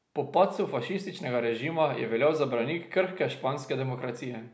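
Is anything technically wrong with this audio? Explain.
No technical faults are audible.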